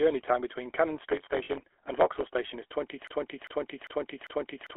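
Throughout, the speech carries the sound of the GSM full-rate codec. It models the vocal tract and drives it with a sparse, regularly spaced pulse excitation, at a rate that fits 13 kbps. The result is a buzzy, gravelly roughness over every syllable. The band is confined to roughly 300 Hz to 3.4 kHz, so sibilants lose their edge and the voice sounds boxed-in and narrow. The codec damage is plainly audible rather than subtle.

From 1.44 to 1.50 s there are lost GSM frames, about 40 ms of them, which fits two consecutive frames. The decoder covered the gap by repeating the parameters of the last good frame. Instead of a clean dropout, the sound briefly freezes into a rough, metallic ring before normal decoding resumes. The gap is short, so it reads as a small glitch rather than a fade to silence.

At 3.07 s a broken-record loop begins and runs to the end of the clip. A fragment of about 0.4 s repeats exactly, back to back, four times. 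The likely cause is a stalled player, encoder or stream that kept sending the last fragment it held. Whatever speech should have followed in those final seconds is missing and replaced by the repeating fragment.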